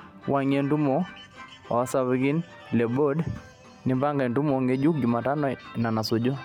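The speech signal shows no technical faults at any point in the recording.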